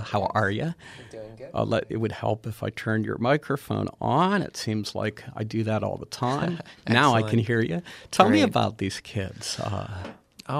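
No technical faults can be heard anywhere in the clip. The audio stays steady throughout, with nothing that calls for comment.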